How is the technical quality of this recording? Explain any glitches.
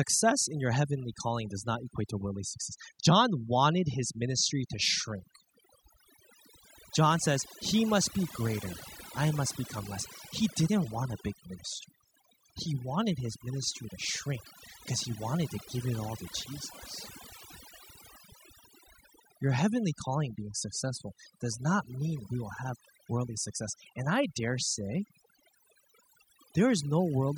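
Throughout the speech, the background falls to near silence dotted with twinkling specks. This is overdone noise removal, where aggressive reduction switches off frequency bands near the noise estimate and strips quiet vocal detail.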